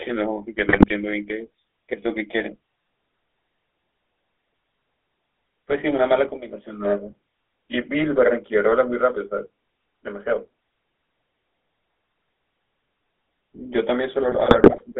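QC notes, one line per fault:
Throughout, GSM full-rate codec: the speech has that buzzy, gravelly grit you get when the vocal tract is modelled and driven by a coarse pulse train, and it sits in a narrow band of roughly 300 Hz to 3.6 kHz. The damage is plainly audible, consistent with an old 13 kbps full-rate coder.
0.68–0.91 s and 14.28–14.85 s, GSM bit errors: short bursts of squawking, popping and gargling where corrupted filter, pitch and gain values hit the decoder, briefly bending the spectrum or jumping the level. The later burst runs longer.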